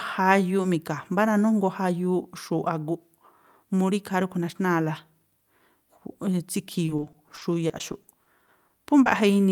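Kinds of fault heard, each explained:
Repeated packet loss (robotic sound): from 6.85 to 9.08 s, short holes of up to 20 ms keep getting filled with repeated sound, leaving the speech choppy.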